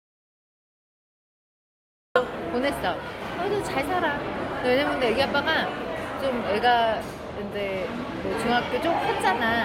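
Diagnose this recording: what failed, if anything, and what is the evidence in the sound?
The failure is an audio dropout to silence at the input stage. The clip opens already in digital silence, with no room tone or noise floor at all, and stays that way until the sound enters abruptly at 2.16 s. A silent gap like this means the recorder kept writing samples while nothing reached it, most likely because the input device or its link was disconnected or muted. Whatever sound occurred in those first 2.16 seconds is not recoverable.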